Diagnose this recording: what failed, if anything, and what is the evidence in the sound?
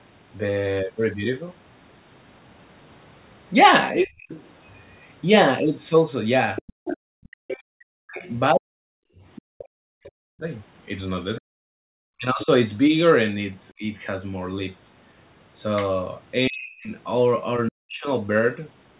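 The call processing is where this went wrong. Speech suppressed in double talk shows up at 4.0 to 4.26 s, 7.2 to 13.84 s and 16.48 to 18.07 s, where the talker dips by up to roughly 40 dB. The likely cause is the echo canceller mistaking overlapping talk for echo and ducking everything.

There's also the other side's voice leaking through at 4.28 to 4.44 s, sitting around 20 dB under the speech, and again from 6.56 to 10.1 s, louder at about 10 dB down. That's likely residual loudspeaker echo the canceller never fully subtracted from the mic.

The background gets gated by the echo canceller at 6.73 to 6.85 s, 9.11 to 9.58 s and 11.81 to 11.89 s. The room tone drops about 40 dB for roughly 70 to 300 ms, then snaps back when the suppressor releases its hold on the mic.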